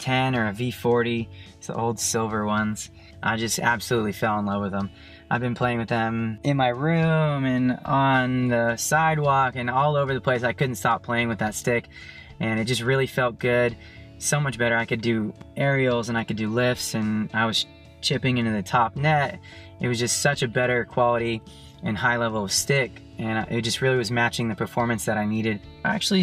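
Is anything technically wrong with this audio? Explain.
No, nothing technically wrong can be heard in this audio. No part of it points to a problem in how it was captured, processed or delivered.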